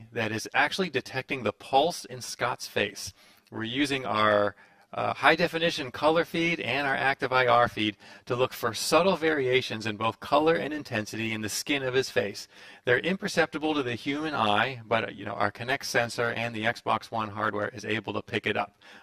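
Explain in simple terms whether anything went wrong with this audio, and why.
The whole clip sounds hollow and phasey, close to doubled. This is channel delay (comb filtering): one channel ran about 10 ms late, and mixing both to mono cancels sound at evenly spaced pitches, starting near 50 Hz.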